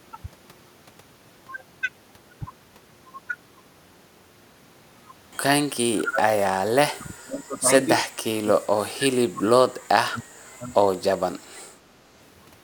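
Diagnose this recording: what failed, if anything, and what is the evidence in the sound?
Speech suppressed in double talk appears from 5.74 to 7.68 s, again from 7.85 to 10.32 s, and briefly at 10.58 to 10.73 s. The speech sinks sharply, about 40 dB at its deepest in the first stretch, about 30 dB in the second and only about 10 dB in the last short dip. The likely cause is the echo canceller in call processing: with both ends talking, it could not tell this talker from loudspeaker echo and attenuated everything.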